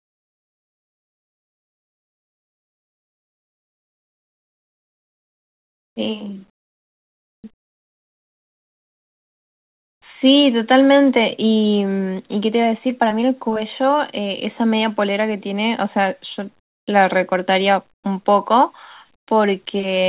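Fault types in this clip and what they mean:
Comfort noise in place of the background: pauses become a flat, featureless hiss, up to about 30 dB quieter, likely from receiver-generated noise during silent transmission.
Jitter buffer slow-down: near 6.1 to 6.3 s, speech drags at 86% speed without a pitch change, as repeated pitch periods add 39 ms.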